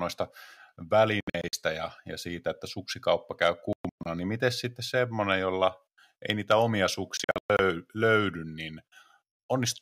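Speech cuts out in choppy bursts at 1.21–1.53 s, 3.73–4.06 s and 7.17–7.59 s, with about 190–255 ms missing in each and runs up to 116 ms, then resuming as if it played on. That's most likely Bluetooth dropout, with packets reaching the headphones too late and getting discarded.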